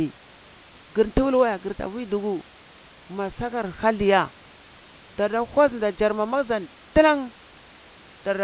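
Nothing goes wrong anywhere in the clip: the speech comes through a narrowband call path with nothing above 4 kHz, which fits a G.711 mu-law codec, and there's a little room noise sitting about 28 dB below the speech.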